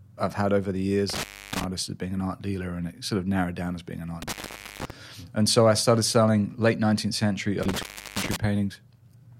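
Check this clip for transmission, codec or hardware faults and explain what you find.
The speech drops out three times from an intermittent contact: at 1.10–1.64 s after "I've had over the", at 4.22–4.90 s after "down as being an", and at 7.63–8.36 s. A loose connection opens for about 0.30, 0.48 and 0.34 s, muting the signal to faint hiss with crackle where the contact breaks and remakes.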